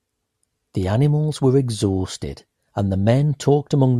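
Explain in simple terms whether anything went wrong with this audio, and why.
Nothing went wrong with this recording: the speech signal stays intact and continuous throughout, with no technical faults to be heard.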